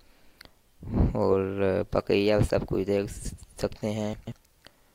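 Right near the end, from about 4.13 to 4.32 s, there's a short jumbled patch that comes from chunks out of order. One block of audio, roughly 46 ms long, turns up three blocks late, so it plays after material that should have followed it. Nothing actually goes missing, but the sequence gets shuffled, and the three hard joins where the pieces butt together leave a garbled-sounding moment.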